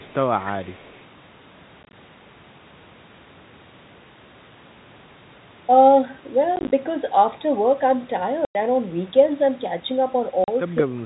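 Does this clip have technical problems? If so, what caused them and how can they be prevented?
Yes. At the far end, a loudspeaker's sound likely leaked past the echo canceller and was sent back. The result is a faint echo leak delayed by 175 ms, roughly 25 to 30 dB below the speech, from 0.00 to 0.14 s and from 0.40 to 1.03 s. Better echo cancellation or a headset would prevent it.

The network dropped packets and the receiver filled each gap with silence. This is packet loss filled with silence, leaving hard-edged holes. From 1.83 to 1.93 s, 60 ms of short gaps up to 20 ms long are scattered over 100 ms. From 6.56 to 6.72 s, 80 ms are scattered over 160 ms. A solid 100 ms hole runs from 8.45 to 8.55 s, and a 40 ms one from 10.44 to 10.48 s. The hole lengths fit 10 ms packets. Packet loss concealment and a jitter buffer would smooth these over.

From 10.82 s to the end, both sides likely talked at once. 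The echo canceller turned the talker down along with the echo, so the speech dips by as much as about 25 dB over roughly 200 ms. This is speech suppressed in double talk. A canceller with better double-talk detection would keep the talker's level.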